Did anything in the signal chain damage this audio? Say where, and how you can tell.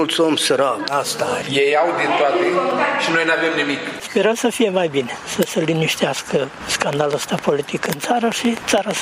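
Yes. A train of clicks runs from 6.93 s to 8.98 s, near the end of the clip. There are around fifteen of them, about 5.9 per second, spaced unevenly. Each has much the same sharp shape. They stand out at about 15 dB above the surrounding sound, so they tick through quiet moments too. The likely source is interference reaching the analogue wiring from nearby equipment, injecting a pulse each time it switches.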